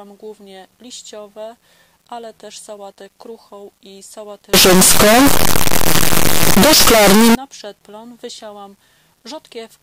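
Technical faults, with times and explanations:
4.54–7.35 s, signed and unsigned mixed up: harsh, very loud distortion where quiet moments blare like loud ones, likely from 8-bit samples read with the wrong sign convention.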